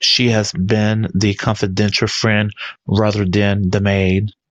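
From the start to about 2.21 s there's crude rate conversion: the speech seems to have been stretched to a new rate by linear interpolation with no proper filter, which points to something like a 44.1 kHz to 48 kHz step. That leaves a gritty, inharmonic fizz riding on the louder and brighter parts, around 35 dB below the speech.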